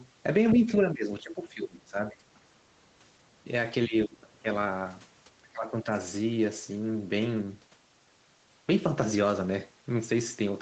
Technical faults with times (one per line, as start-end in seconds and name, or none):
0.54-2.22 speech suppressed in double talk
3.34-3.48 speech suppressed in double talk
3.87-4.47 speech suppressed in double talk
5.40-5.87 speech suppressed in double talk